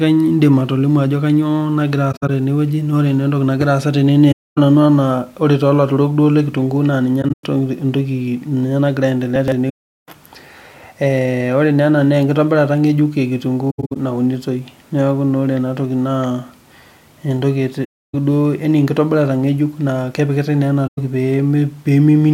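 Soft-edged dropouts from AAC frame loss with muting occur at 2.12, 4.31, 7.21, 9.69, 13.70, 17.84 and 20.87 s. Each time the decoder received no data for part of the stream and output a zeroed spectrum. The overlapping transform windows fade the sound out and back in, so the edges of each gap are soft. The lost spans run from about 107 ms to 384 ms, the longest at 9.69 to 10.08 s. At 2.12, 7.21 and 13.70 s the losses come in separate short runs, the longest around a tenth of a second. The gap at 13.70 s ends just before "naunitoi na ore enatoki". The hole sizes fit frames of roughly 21 ms, which points to 1024-sample AAC frames at 48 kHz.

Between 9.36 and 9.52 s, just before the longest dropout, chunks out of order produce a brief jumble. A 40 ms block of audio arrived three chunks late and was played after the material that should have followed it. No audio is missing, but the wrong sequence creates three abrupt joins, heard as a short garbled moment.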